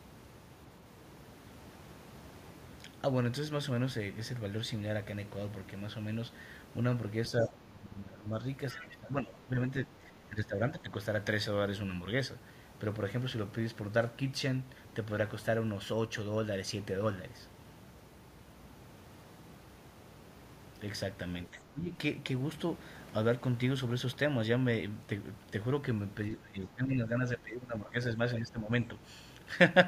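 Speech suppressed in double talk at 7.42–8.34 s: the talker dips by about 15 dB, likely because the echo canceller turned both voices down while both sides spoke. The same happens at 8.73–9.58 s. From 8.70 to 8.87 s, the other side's voice leaks through about 15 dB below the speech, likely loudspeaker echo the canceller left in the microphone signal. A fainter scrap of it, about 30 dB down, follows at 10.03–10.07 s. Further dips of about 10 to 15 dB follow at 10.11–10.92, 21.50–21.94, 26.36–27.97 and 28.39–28.71 s.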